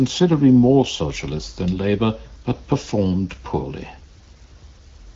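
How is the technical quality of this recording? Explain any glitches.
No glitches can be heard.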